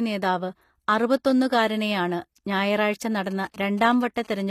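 HE-AAC compression runs through the whole of this speech recording, and its damage is plainly audible. The treble stops at 14.9 kHz, and what sits above the core band sounds rebuilt rather than captured. The likely cause is a spectral band replication codec at a rate around 24 kbps: it codes only the lower spectrum and fills the top by copying lower bands upward under a coarse envelope, so the upper harmonics no longer line up with those below. GSM signalling bursts appear from 3.31 to 4.42 s as a galloping dit-dit-dit of short buzzes repeating at about 217 Hz, sitting roughly 25 dB below the speech. A nearby 2G phone sending grouped radio bursts, as it does while signalling before a call or text, gets rectified in the audio circuit, and the TDMA frame rate becomes that buzz.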